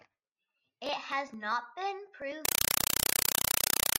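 Compressed stream played as audio from 2.45 s to the end, just after "has not been". Encoded data, pointing to an AC-3 stream, is output as raw samples without decoding. The speech is replaced by loud, chattering static: 4 ms noise bursts repeating 31.25 times a second.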